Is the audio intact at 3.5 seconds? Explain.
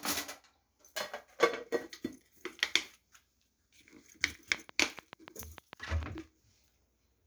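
Yes, at 3.5 s the sound is intact, with no audible fault at that moment.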